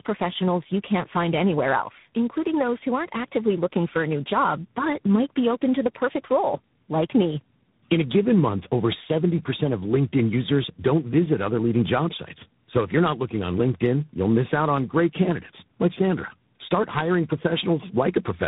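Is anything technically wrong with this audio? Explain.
Yes. Throughout, the speech shows tandem speech coding: it passed through three speech coders in a row, likely narrowband mobile coding twice and then low-rate ADPCM, each re-encoding the previous one's damage. Nothing is present above 3.8 kHz, and the voice sounds rough, muffled and warbly.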